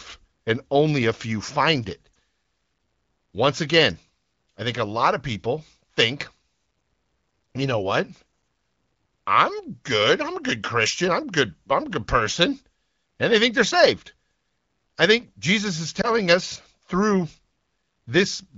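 Lost AMR speech frames occur at 2.13 to 2.15 s, just after "a few find it", and at 16.01 to 16.08 s, just before "us through". Radio errors corrupted a frame, and the AMR-WB decoder patched the gap by repeating the previous pitch and vocal-tract settings at reduced gain. Each gap is heard as a brief dip or warble in the speech.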